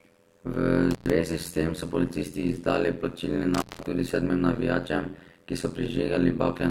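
Overlap-add ripple runs throughout the speech: frames rejoined with a mismatched overlap make the level swing about 60 dB around 100 times a second, a metallic buzz with extra tones around each note. Intermittent contact breaks the sound at 0.91–1.10 s and 3.54–3.86 s, a loose connection opening for about 112 ms and 183 ms, with crackle at each edge.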